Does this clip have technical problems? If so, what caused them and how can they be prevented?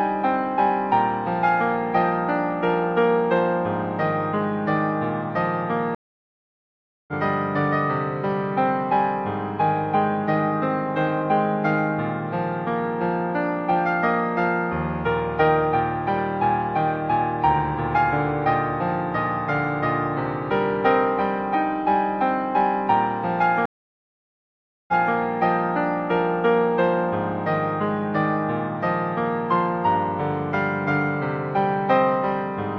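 Yes. Two stream reconnects: at 5.95 s the sound drops for 1.13 s and resumes about a second further on; at 23.66 s a 1.22 s gap ends 0.28 s earlier, repeating material. Each shows as a flat waveform gap, a blank spectrogram column. Larger client buffering and retry-before-underrun logic prevent this.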